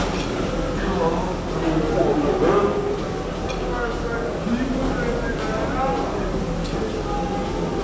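Throughout the clip, wrong sample rate playback runs the audio at 0.726 times its proper speed, dropping pitch by 5.55 semitones. The samples are clocked out more slowly than they were captured, consistent with 22 kHz material played at 16 kHz, so everything sounds low and sluggish.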